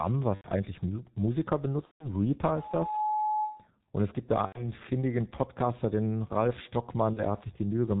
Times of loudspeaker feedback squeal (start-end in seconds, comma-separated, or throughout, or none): 2.47-3.68